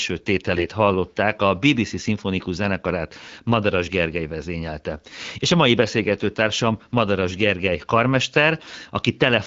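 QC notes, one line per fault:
0.56–0.66 s, AMR bit errors: just before "hallották a", the speech keeps its pitch and level but turns hoarse, scratchy and gargly for about 110 ms, which fits five 20 ms frames of the AMR-WB stream. Roughly one bit in twenty arrived flipped, so the excitation pulses land in wrong places and the fine pitch, gain and spectral values drift. On a spectrogram the harmonics break into ragged broadband fuzz, and the waveform shows irregular, spiky cycles at a steady envelope.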